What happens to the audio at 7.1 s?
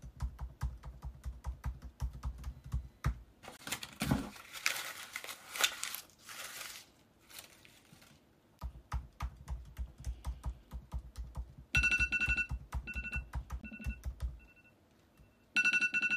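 Nothing goes wrong at 7.1 s; the audio plays through that moment intact, with no dropout, click, distortion or other fault.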